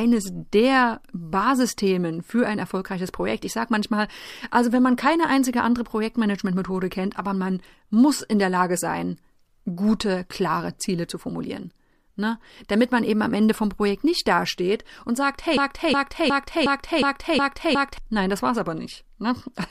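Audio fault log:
15.57–17.98 s, broken-record loop: right after "nicht dasteht und sagt" the speech locks onto one fragment of about 0.36 s and plays it seven times back to back. Every repeat is identical, with no fading or drift, which sets it apart from an echo or reverb tail that decays, and from a stutter that varies. It likely comes from a stalled player or stream resending its last buffer, so the speech that belonged there is lost.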